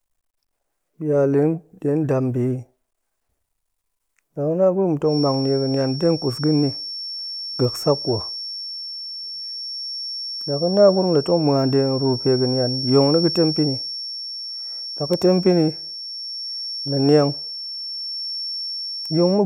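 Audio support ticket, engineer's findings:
Feedback whistle, 5.02 s to end of clip. Thin steady tone at 5.4 kHz, roughly 10 dB under the speech, level swells and fades slowly. Likely loudspeaker-to-mic loop held at the edge of instability; loop gain near unity, no runaway.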